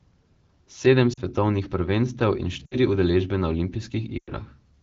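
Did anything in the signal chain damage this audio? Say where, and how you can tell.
Yes. Lost AMR speech frames on the radio link damaged it, and the decoder's concealment filled the gaps. At 1.13 to 1.20 s, just before "prvenstev in", the sound drops toward near silence, and 40 ms fits two 20 ms frames. At 2.66 to 2.76 s, between "prvenstev in" and "udeležbe na", it drops to near silence for about 60 ms. At 4.18 to 4.31 s, 100 ms of sound sags toward silence before recovering roughly. On a spectrogram each gap shows the harmonics freezing into flat repeated bands that fade out. The waveform's envelope decays smoothly instead of following the speech. The AMR-WB codec around these gaps is clear at 12.65 kbit/s.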